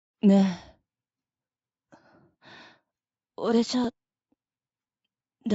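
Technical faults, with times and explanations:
3.84 to 5.46 s, periodic USB or driver dropouts: roughly 1 ms skipped every 0.124 s, a driver stall dropping samples, heard as regular ticks over the signal.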